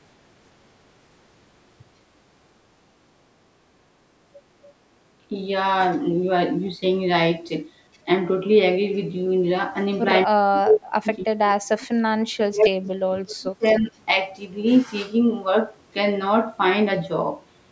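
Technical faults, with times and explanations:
5.29–5.35 s, 10.26–11.9 s and 12.37–13.92 s, speech suppressed in double talk: the level of the speech sinks while another signal overlaps it. The first dip is brief and shallow, around 5 dB. The later two each last roughly a second and a half and pull the speech down by several tens of dB, nearly to silence in places. This is likely an echo canceller that could not tell the near talker from loudspeaker echo and turned both down.
13.68–13.8 s, echo leak: a faint, short scrap of delayed sound appears, roughly 20 dB below the speech and trailing it by about 0.31 s. It is likely loudspeaker playback that one side's echo canceller failed to remove fully and sent back down the line. It arrives near the end of the second deep suppression.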